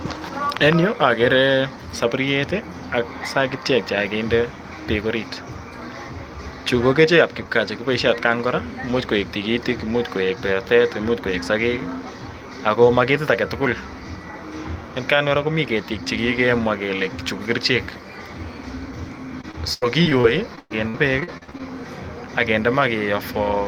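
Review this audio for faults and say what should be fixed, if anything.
From 19.41 to 21.64 s the speech turns choppy and robotic, with sixteen short holes of up to 113 ms. This is repeated packet loss. Each missing stretch is patched by extending the previous sound, so about a quarter of that span is filler. To prevent it, send the audio over a more stable network connection with a larger jitter buffer, or add forward error correction.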